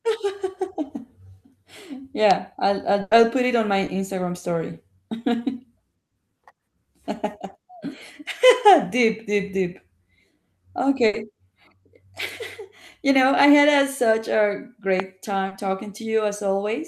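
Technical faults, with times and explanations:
2.31 s, loud pop: a single sharp pop about 15 dB above the speech, likely from a sudden voltage step such as a switch or static. The speech continues underneath.
3.01–3.13 s, burst of packet loss: about 100 ms of speech is missing. The receiver extended the last sound and faded it, giving a held buzz or hiss before the speech resumes further on.
3.85–3.89 s, short concealed packet loss: 20 ms never arrived. It was patched by continuing the previous sound, heard as a brief smear before the real audio blends back.
11.07–11.15 s, burst of packet loss: 60 ms is lost. The gap was filled with the last sound fading away, so the speech jumps ahead afterwards.
15.00 s, loud pop: another single pop, about 15 dB above the speech, again likely a voltage pulse. It sits on top of the continuing audio.
15.47–15.53 s, short concealed packet loss: 40 ms is missing. 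It was covered by extending the preceding sound, heard as a short wobble or smear.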